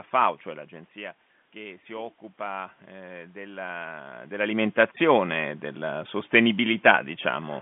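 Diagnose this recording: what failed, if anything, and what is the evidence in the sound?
The automatic gain rising fault sits in the call-processing stage. Around half a second in, the talker moves away and the level at the microphone drops by about 11 dB. From 0.95 s to 4.78 s the gain control climbs slowly to compensate, adding about 7 dB. Voice and room noise swell together over nearly four seconds. The rise wins back only part of the drop, and it lifts the background along with the speech.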